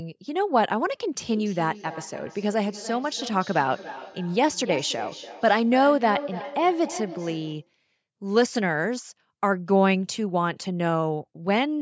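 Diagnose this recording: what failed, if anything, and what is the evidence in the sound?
Call processing failed to contain a feedback echo between two devices from 1.31 s to 7.74 s. Speech returns every 300 ms or so, thinner and ringing, peaking about 13 dB below the direct level. One device's microphone re-captures the other's playback, which its echo canceller cannot remove.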